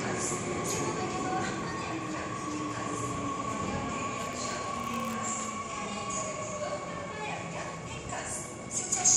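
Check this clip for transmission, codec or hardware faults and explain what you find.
One hardware fault is present: buffer tearing from 4.19 to 5.48 s. The writer and the reading hardware have drifted out of step on the ring buffer, so every period contains a small sliver, under one percent, of audio from roughly one lap, about 20 ms, earlier. Each sliver is bounded by hard joins, producing a steady robotic rattle at 100 Hz over the sound. A spectrogram shows thin vertical clicks repeating every 10 ms. The waveform shows regular step discontinuities.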